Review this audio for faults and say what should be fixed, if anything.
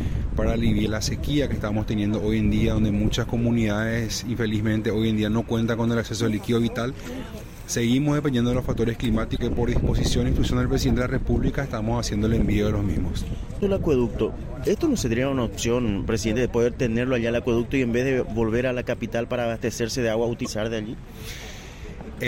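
Damaged data in a compressed stream shows up as short disruptions at 0.82–0.87, 9.34–9.40, 13.57–13.63 and 20.42–20.47 s, where the decoder misreads corrupted frames and loses sync. Check the file against its source or re-fetch it, and verify transfers with checksums.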